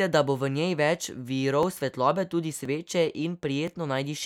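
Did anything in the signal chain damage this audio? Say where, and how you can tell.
Yes, at the driver or buffer stage: periodic USB or driver dropouts, starting just after "bo v njej več" and recurring every 1.02 s from 1.63 s to 3.68 s, three ticks in all. Each loses a couple of milliseconds of audio that is skipped rather than silence-filled, so the speech jumps ahead abruptly. On a waveform each tick is a sharp discontinuity where the signal is spliced; on a spectrogram it is a thin, evenly spaced vertical broadband line.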